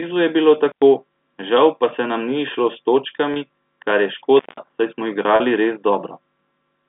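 At 0.69 to 0.82 s an intermittent contact opens a loose connection for about 100 ms. The sound drops out between two crackles, with faint hiss on the open line.

At 3.34 to 3.36 s packet loss with pitch repetition sets in. About 20 ms is missing, which fits a single lost packet. The receiver bridges it by looping the last pitch period, giving a brief held, buzzy tone.

A second intermittent contact runs from 4.37 to 4.60 s. This time the line stays open for 182 ms, so the crackle-edged gap is longer and the background hiss is more exposed.

At 5.36 to 5.40 s pitch repetition again covers lost packets, this time 40 ms, consistent with two packets. The repeated cycle holds longer and fades before the sound returns. Underneath, the G.711 telephone path keeps the band within roughly 150 Hz to 3.6 kHz.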